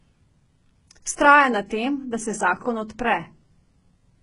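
HE-AAC compression damage runs through this entire speech clip: the treble sounds synthetic, with s sounds turning gritty and lispy and nothing above 10.8 kHz. This likely comes from spectral band replication copying lower bands upward at a very low bitrate, which fits roughly 12 kbps.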